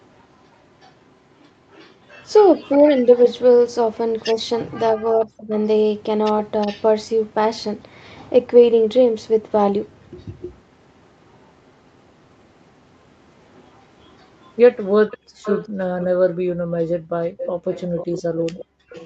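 From 0.81 to 3.18 s an echo leak sets in, likely from a loudspeaker echo canceller letting through a copy delayed by 367 ms. It sits about 30 dB under the speech and shows on a spectrogram as faint delayed copies of the voice's harmonics. It returns at 4.19–5.66 s and, at about 25 dB down, at 6.61–6.85 s. Within that second stretch, at 4.94–5.52 s, speech is suppressed in double talk, likely because the canceller ducked its own talker along with the loudspeaker echo. The speech dips by roughly 25 dB in pieces totalling about 0.4 s, appearing as notches in the waveform envelope. The echo grows to about 15 dB below the speech at 13.54–16.06 s and again from 17.38 s to the end. From 15.18 to 18.92 s the canceller gates the background, with the room sound dropping by about 39 dB for roughly 1.5 s in total. On a spectrogram these drops appear as blank gaps in the noise floor, and the energy above 8 kHz is absent throughout.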